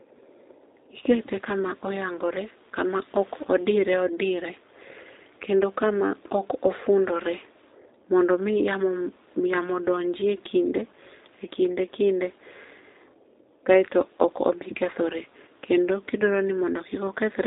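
Throughout the speech, the G.729 codec is plainly audible. The sound points to an 8 kbit/s stream. Speech is rebuilt from a modelled vocal tract, a pitch predictor and a few pulses per frame. Nothing passes above 3.8 kHz. Voices sound rough, thin and synthetic.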